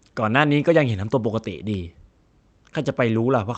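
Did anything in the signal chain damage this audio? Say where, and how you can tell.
No, nothing in the chain damaged this speech; it has gone through a WebRTC call path, and the top of the spectrum stops near 8 kHz, which fits a wideband Opus setting, with no breaks, dropouts or distortion anywhere in the signal.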